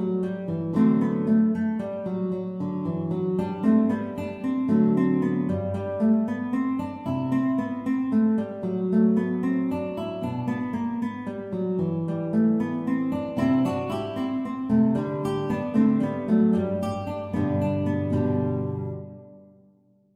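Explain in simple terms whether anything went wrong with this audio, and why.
Nothing went wrong here.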